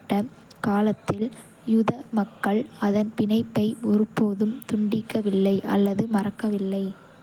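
No technical faults can be heard in this speech recording. The Opus voice compression leaves only light traces, and its hybrid mode keeps the full band, with content reaching up to about 20.2 kHz.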